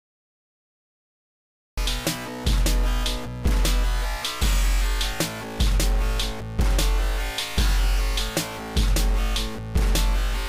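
The clip opens with digital silence until about 1.78 s. Then the sound enters abruptly, already in progress. This is a cut-off start: capture began late, so the onset was lost. There is no natural attack or fade-in.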